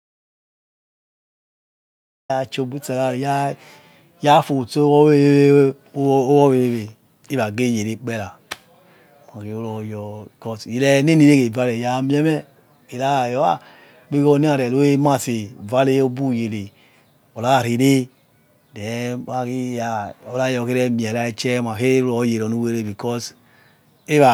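Right from the top, the clip opens in an audio dropout to silence that's already under way and runs to about 2.3 s: dead silence, no room tone at all. The input was likely lost, through a disconnect or stray mute, while recording continued, before the speech cuts in.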